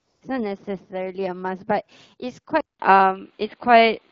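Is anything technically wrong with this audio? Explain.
Yes, there are two kinds of fault in this speech clip.

AMR comfort noise: From 0.00 to 0.21 s the background is a smooth, even hiss rather than a real room, and a second brief patch of the same synthetic noise appears from 2.77 to 2.79 s. During those stretches no speech frames were sent. The phone treated the sound as silence, and the receiver filled the gap with artificial noise built from a rough outline of the background's level and spectrum.

Input switched to a poorer device: From 2.61 s to the end the sound turns duller and boxier. Nothing passes above about 4.9 kHz, the level shifts by roughly 5 dB, a new noise floor sits around 40 dB below the speech, and a gap of about 189 ms of silence marks the change. This is likely the recording moving to a different microphone or a headset's call profile, with its narrower band and its own colouring. 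The AMR-WB coding at 12.65 kbit/s adds only light damage of its own.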